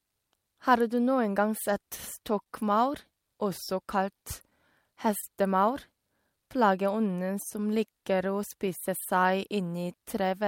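Speech, with clock drift between sender and receiver running through the whole clip. The sender's clock runs slow, by roughly one and a half percent. The receiver's buffer keeps draining, so it stretches or repeats short slices to keep up. Small timing hiccups recur at uneven intervals from start to end. Between 1.06 and 2.47 s there are scattered short gaps. About three packets went missing or arrived late there. The receiver filled each hole by carrying the last sound forward, roughly 40 ms in all, with the longest near 30 ms. These show up as brief ticks and smears, and nothing is lost. From 5.20 to 5.24 s there is a short stall from a late packet. The buffer ran empty while waiting. The last sound was held for 27 ms, then playback resumed where it left off. Nothing is skipped, but the sound hangs briefly with a slight buzz or dip.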